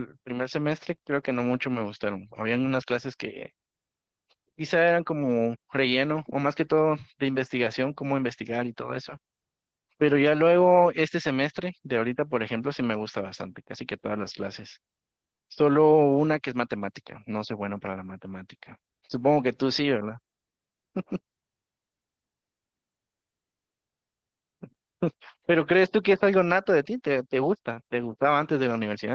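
Opus voice compression throughout: the band stops near 8 kHz and coarse linear-prediction coding leaves the speech muffled, hoarse and faintly robotic, consistent with a low bitrate around 12 kbps.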